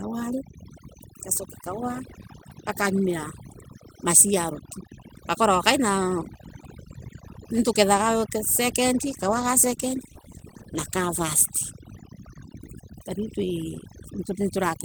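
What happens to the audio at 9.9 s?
At 9.9 s the audio sits inside a call bitrate drop that runs from 9.04 to 12.33 s. The encoder is starved of bits and codes more coarsely, so the sound turns rough and muffled. This fits a fall from 32 to 16 kbps, held at its lowest for about 2.2 s.

Overdone noise removal also runs through this moment. The suppressor pushes bands near its noise estimate far down, taking quiet parts of the speech with them. The background drops and breaks up into twinkling specks.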